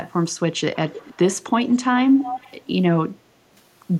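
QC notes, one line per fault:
0.88–1.17 s, 1.63–1.76 s, 2.18–2.67 s: echo leak. A delayed copy of the speech trails it by 317 ms. It sits about 15, 20 and 10 dB below the speech. The likely cause is a far-end loudspeaker echo the canceller missed.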